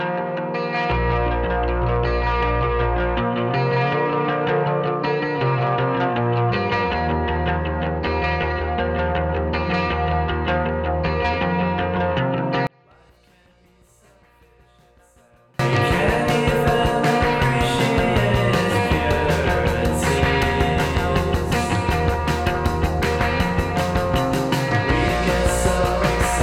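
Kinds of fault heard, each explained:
One channel inverted: one stereo channel likely had its polarity flipped, so common content cancels when summed to mono, dropping the sound by about 35 dB from 12.67 to 15.59 s.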